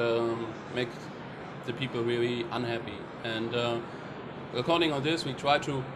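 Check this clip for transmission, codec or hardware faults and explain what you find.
Nothing in the clip points to a transmission, codec or hardware fault. The audio shows no sign of trouble in the chain that captured or carried it.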